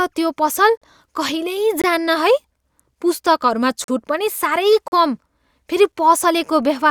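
Six gaps between stream segments interrupt the speech at 0.77 s, 1.82 s, 2.84 s, 3.84 s, 4.88 s and 5.92 s, one per second. Segment time stamps leave holes that are filled with silence, from about 4 to 42 ms. Each is a hard-edged dropout. No speech is lost.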